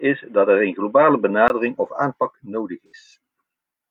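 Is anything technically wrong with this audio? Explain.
Yes, there are two faults.

From 0.0 to 1.5 s, the speech is dull and boxy, with nothing above 3.8 kHz. A 20 ms gap marks the change, and the level shifts by around 5 dB. A faint new hiss sits far below the speech. The likely cause is an input switched to a poorer device.

From 2.87 to 2.92 s, there is AAC frame loss with concealment. For about 43 ms, which fits a single lost frame, the decoder rebuilt the sound from the last good spectrum. The result is a brief smeared, phasey patch.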